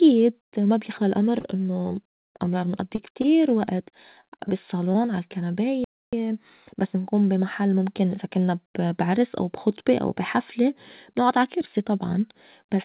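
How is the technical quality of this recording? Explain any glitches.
The speech has been through a G.711 mu-law call path, which fits 64 kbps and leaves nothing above 4 kHz, and it has two glitches.

From 1.4 to 4.97 s, just after "ما بيخلى الأمر", scattered short gaps: about ten lost packets, each patched by extending the previous sound, leaving brief ticks and smears up to roughly 40 ms.

From 5.84 to 6.13 s, a playback stall: the player likely ran short of data or was blocked, so the speech cuts to silence for 284 ms before resuming.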